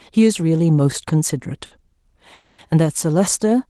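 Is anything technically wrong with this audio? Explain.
Yes, the speech has two timing faults.

Short stall from a late packet, 1.65 to 1.73 s: a packet arrived late and the jitter buffer ran dry, so the receiver stretched the last sound for about 60 ms. It resumes where it left off, so nothing is lost, but that sound lingers with a slight buzz.

Call audio freeze, 2.33 to 2.60 s: the sound hangs for about 250 ms as a fading buzz, without dropping to silence, then carries on from the same point. The likely cause is packets held up in transit emptying the jitter buffer, which inserts a gap rather than cutting anything. Both events sit on a call path whose band limit near 12 kHz points to the Opus codec.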